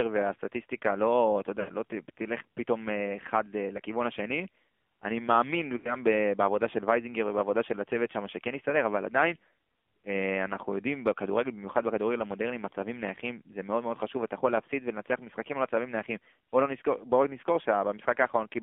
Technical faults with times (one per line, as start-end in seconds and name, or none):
0.00-18.62 AMR narrowband mobile codec
1.60-1.71 lost AMR speech frames
5.78-5.95 lost AMR speech frames